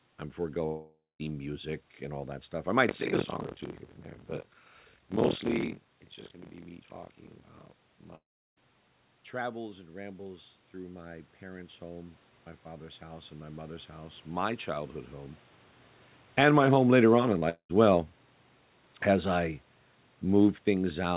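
A speech recording carried over a call has three gaps, at 0.66–1.21 s (just before "music and all that"), 8.15–8.62 s and 17.49–17.71 s. In each, the last sound smears briefly and then falls silent before the speech resumes further on, which is likely a long network dropout. From 2.87 to 8.87 s, right after "all that stuff I", a robotic rattle at about 43.1 Hz rides on the speech. This is buffer tearing: roughly 40% of each period replays audio from around 50 ms earlier, which fits a 1024-sample buffer. Between 9.40 and 15.00 s, voice and background swell together by about 10 dB as automatic gain rises. A shorter rise of about 4 dB follows at 16.48–17.03 s. From 16.22 s to the end, the level sinks with its background as automatic gain falls. A brief smear at 17.39–17.43 s is short concealed packet loss, where roughly 20 ms was filled in by continuing the preceding sound.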